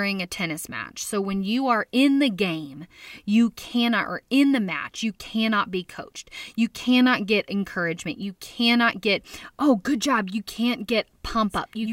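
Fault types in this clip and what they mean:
Nothing stood out on listening to this speech.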